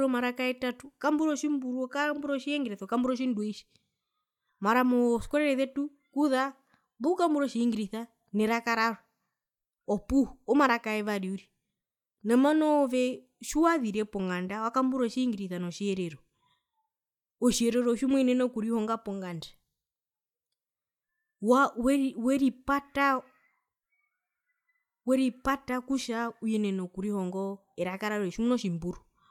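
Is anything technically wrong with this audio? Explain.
No, nothing is technically wrong with this audio.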